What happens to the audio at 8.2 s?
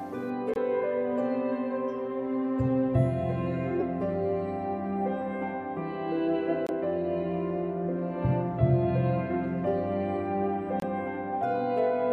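Nothing goes wrong at 8.2 s; the audio there plays through intact, with no dropout, click or other fault.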